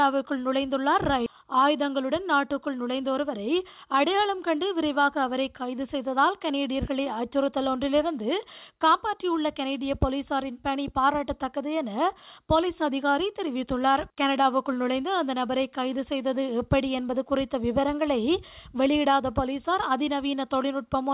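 Nothing stood out on listening, beyond the narrow top end of the G.711 mu-law call path, which leaves nothing above 4 kHz.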